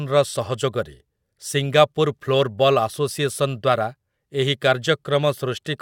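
A speech recording with no audible technical faults anywhere in it.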